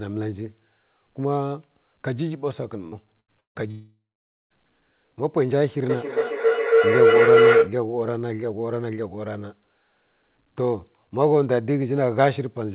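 Short concealed packet loss comes first, at 2.88 to 2.95 s. About 40 ms of the speech never reached the decoder in time. The receiver bridged the hole with roughly 41 ms of sound continued from what came just before, then blended back into the real signal. What you hear is a brief smear or wobble rather than a clean gap, and whatever was in those 40 ms is simply absent.

A burst of packet loss follows twice. The first runs from 3.20 to 3.31 s, where about 80 ms went missing and roughly 79 ms was filled in. The second runs from 3.40 to 3.58 s, where about 160 ms was lost. In the first case the concealment extends the last sound and turns it down as the gap goes on, so it comes across as a held buzz or hiss. In the longer burst that fill is about 150 ms of silence before the audio resumes further along.

A long network dropout runs from 3.71 to 4.53 s, with about 800 ms of audio missing. 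For the first part the last sound is stretched into a fading buzz or hiss. After that, roughly half a second is essentially silent until the speech returns, already further on. A stretch this long with nothing arriving is most likely a network interruption rather than a handful of lost packets.

A feedback howl sits from 5.89 to 7.79 s. It behaves like two devices in the same room on the call, with each trip from loudspeaker back into microphone gaining level instead of dying away. The loop settles on a tone around 500 Hz that pulses roughly every third of a second, matching the round-trip delay. At its peak it reaches about 8 dB above the speech.

Throughout, nothing is heard above 4 kHz, which fits a narrowband telephone codec such as G.711 on the call path.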